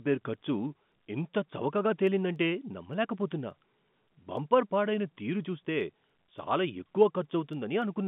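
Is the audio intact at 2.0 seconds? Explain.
No, 2.0 seconds sits inside a run of word clock ticks that goes from about 0.35 s to 7.82 s. The receiving end seems to be running on its own clock instead of locking to the sender's, with a mismatch of something like 70 ppm. Every time the two clocks drift a sample apart, one sample is dropped or repeated, so you get a sharp tick roughly every 0.3 s, around thirty across the clip, riding on top of the narrow telephone-band sound.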